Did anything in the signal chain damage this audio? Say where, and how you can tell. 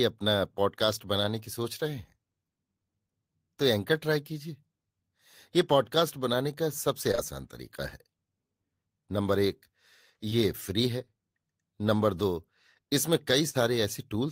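Yes, at the network stage. Short concealed packet loss occurs at 7.11 and 7.15 s, back to back, and again at 10.29 s. Each time about 20 ms of speech failed to arrive. The decoder extended the preceding sound over the hole and then blended back, leaving a brief smear.

A burst of packet loss follows from 13.49 to 13.61 s. About 40 ms went missing. The receiver stretched and faded the last sound across roughly 50 ms, then resumed slightly further on, so the audio holds, dims, and jumps.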